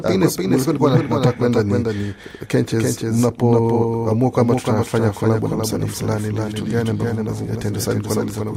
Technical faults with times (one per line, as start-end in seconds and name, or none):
0.00-8.56 doubled audio track